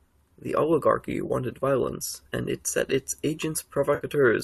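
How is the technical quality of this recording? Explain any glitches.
Two brief dropouts interrupt the speech. The light graininess in the speech is likely from low-delay AAC coding.

AAC frame loss with concealment: from 1.26 to 1.31 s, just before "violence and it set", and again from 3.95 to 4.05 s, the sound turns into a smeared, noisy, phasey patch. The decoder lost roughly 30 ms and then 60 ms of audio, consistent with runs of 10 ms frames, and filled each gap by reusing the last good spectrum.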